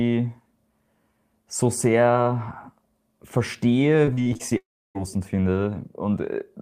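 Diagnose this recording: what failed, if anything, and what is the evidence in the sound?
The network's the culprit here. From 4.05 to 4.53 s there's repeated packet loss with that robotic, choppy edge: five short holes, the longest 40 ms, each patched by stretching the previous sound, so about a quarter of that stretch is filler.

Right after, from 4.57 to 4.97 s, the sound trails off into a brief fading buzz or hiss, then sits in about 310 ms of silence before picking up further on, with roughly 380 ms simply gone. That's most likely a long network dropout.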